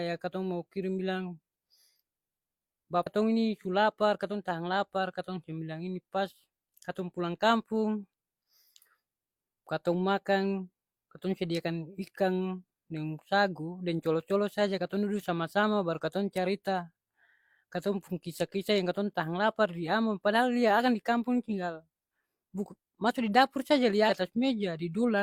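At 3.02 to 3.07 s, just before "ini su lapar katong", and again at 24.06 to 24.10 s, after "masu di dapur", damaged data in the compressed stream makes the decoder misread frames and hunt for sync, leaving a brief glitch.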